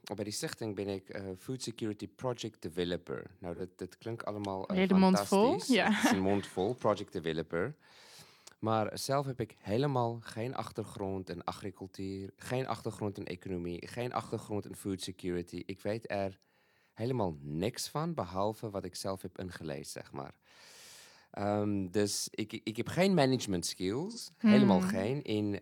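At 3.55, 14.24 and 24.11 s the speech has AAC frame loss with concealment: roughly 43 ms gaps, which fits a single lost frame, patched from the previous spectrum. Each sounds like a brief smeared, noisy blip, showing as a blurred vertical band on a spectrogram.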